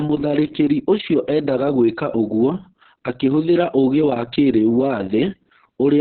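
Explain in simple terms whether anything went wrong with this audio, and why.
The speech has been squeezed hard by Opus voice compression, and the damage runs through the whole clip, start to finish. To save data, the coder keeps only a rough outline of the voice and discards everything above about 4.3 kHz, which points to its narrowest band setting. The speech therefore sounds muffled, like an old telephone, with a hoarse, slightly robotic grain where the detail of the voice was too coarsely rebuilt.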